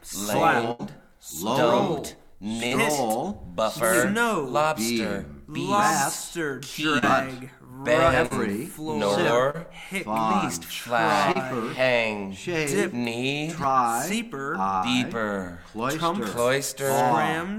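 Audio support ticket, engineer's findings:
Burst of packet loss, 0.71 to 0.82 s: sound freezes into a held, fading tail, then resumes with about 80 ms gone. Receiver concealment stretching the last audio over the gap.

Short concealed packet loss at 2.67, 6.99, 8.26, 9.50, 11.32 and 14.78 s: quick smears or wobbles, roughly 40 ms missing each. Decoder patching each hole from the previous sound.

Dropped buffer (overrun) at 10.54 and 13.64 s: a jump ahead, around 20 ms and 10 ms lost. Likely capture side not reading buffers in time, so audio splices straight across.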